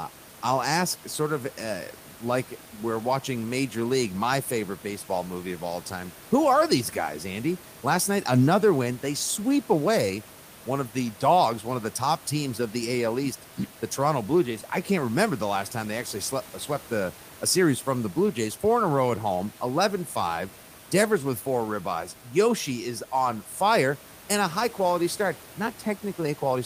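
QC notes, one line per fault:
No faults heard in this speech recording.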